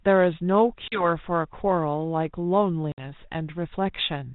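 At 0.88 s the speech drops into a hard-edged silent gap of about 40 ms and comes back slightly distorted, taking until about 1.05 s to settle. At 2.92 s a longer hole of about 60 ms does the same, recovering by 3.05 s. This is packet loss on an ADPCM call: a couple of packets, then a few, went missing from the 32 kbit/s G.726 stream. Because each sample is coded as a difference from an adaptive prediction, the receiver's predictor and step size drifted from the sender's and needed tens of milliseconds to resynchronise.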